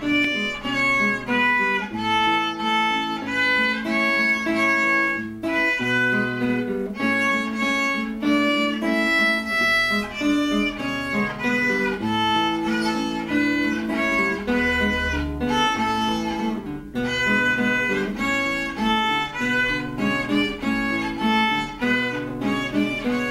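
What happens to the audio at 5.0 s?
Nothing goes wrong at 5.0 s; the audio plays through that moment intact, with no dropout, click, distortion or other fault.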